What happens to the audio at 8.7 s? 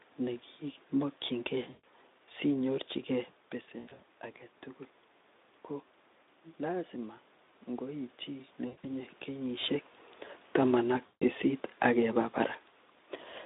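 From 8.67 to 8.86 s the speech breaks up under VoIP packet loss concealed by the speech codec. About 140 ms of audio goes missing, scattered over 160 ms, with the longest gap near 100 ms, which fits several lost 20 ms frames. The decoder fills the gaps by repeating its last pitch and spectral shape at falling gain, so the sound stretches into a fading buzzy tone or coloured noise. A plain dropout would leave silence or a click instead. Because each new frame builds on that guessed state, the sound stays weak or distorted for a moment after the packets resume.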